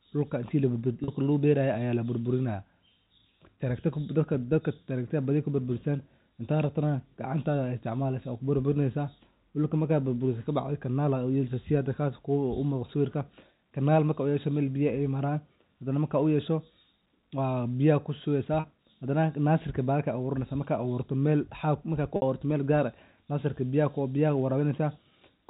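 Packet loss with pitch repetition at 1.04–1.08 s, 18.60–18.64 s and 22.16–22.22 s: the receiver bridged 40, 40 and then 60 ms gaps by repeating the last pitch period, so the first two sound like a brief held, buzzy note and the third fades into silence before the speech returns. The gap lengths fit two, two and three lost 20 ms packets, over a telephone-band signal.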